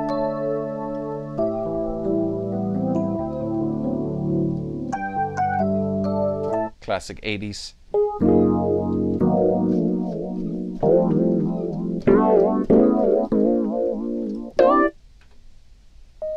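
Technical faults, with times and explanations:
No technical faults can be heard.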